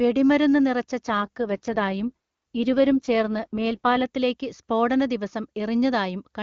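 Speech, with an AMR rate drop from 1.08 to 4.06 s: the network forced the wideband codec down to a lower mode to buy error protection on a weak link. The band and flow stay intact, but the speech turns rough and synthetic, which fits a fall from the top rate to about 8.85 kbit/s, before clearing again.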